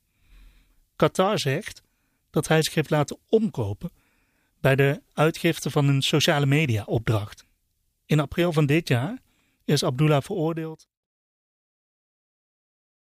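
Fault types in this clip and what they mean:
No faults are present.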